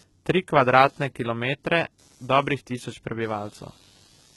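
Computer activity noise runs under the speech from start to finish. Shifting load on the processor, graphics card or mouse disturbs the ground the audio circuit shares with the computer, and that leaks in as a buzzy, chirping scratch pulsing at around 100 Hz. It sits roughly 35 dB below the speech and rises and falls with the machine's activity, not with the talking. On a spectrogram it shows as faint, evenly spaced vertical striations; on a waveform, a low fuzzy floor between phrases.

The treble is heavily damaged throughout and stops completely at 11.8 kHz, a sharp ceiling on a spectrogram. The top band is likely rebuilt by HE-AAC compression, at a bitrate that sounds as low as about 16 kbps. The codec keeps only the lower spectrum and synthesises the highs by copying lower bands upward under a coarse envelope. Harmonics therefore fail to line up across the crossover, and s sounds come out gritty, metallic and lispy.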